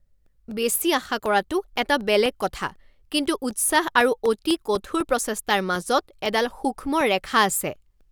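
Periodic USB or driver dropouts run from 0.26 s to 8.01 s, recurring every 0.25 s, around thirty in all. Each time, something briefly stalls the audio path and roughly a millisecond of speech is replaced by silence, giving an even train of ticks heard only under signal.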